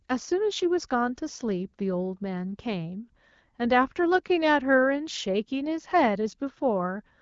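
Nothing here stands out as a fault; the speech comes across the way you'd expect from an AMR wideband (HD Voice) link at 12.65 kbit/s, with only the light coding character that rate normally leaves behind.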